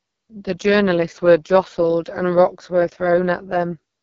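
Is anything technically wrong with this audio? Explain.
Yes, the whole clip carries heavy AMR wideband (HD Voice) codec damage. The speech turns rough and raspy because the codec rebuilds it from a crude pulse-driven vocal tract model, which fits its lowest 6.6 kbit/s mode. Nothing sounds above 7.2 kHz, and the top band is just shaped noise.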